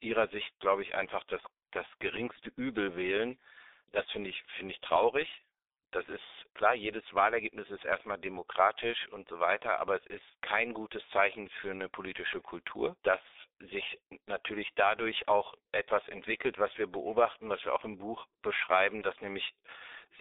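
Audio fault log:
throughout: G.723.1 codec. Heavy low-rate telephony coding, consistent with about 6 kbit/s in coarse 30 ms frames, models the speech too slowly, blurring consonants and adding hoarseness. The line band of 300 Hz to 3.7 kHz, with nothing above 3.8 kHz, muffles it.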